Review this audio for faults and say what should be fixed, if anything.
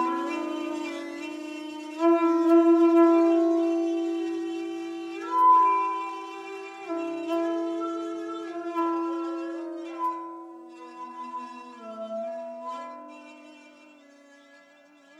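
No faults turn up anywhere in this recording of sounds. Nothing needs to be fixed.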